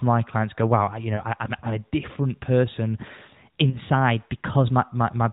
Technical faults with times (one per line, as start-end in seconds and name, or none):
1.16-1.23 lost AMR speech frames
2.97-4.89 drift correction step
3.70-3.78 lost AMR speech frames